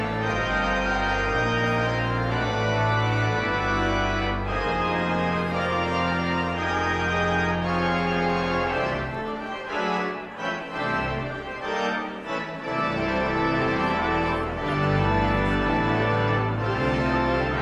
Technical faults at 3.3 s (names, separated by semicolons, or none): none